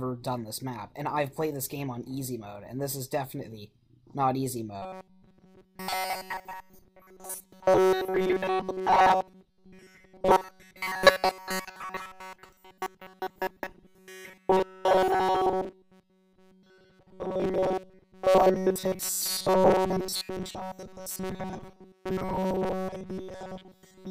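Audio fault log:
4.82–24.10 s, robotic sound from repeated short buffers: from here to the end the sound becomes a rigid, metallic buzz fixed at 188 Hz. This is likely because audio arrives too seldom, so a 5.3 ms segment keeps looping in place of essentially all real signal, and the loop rate sets the buzz.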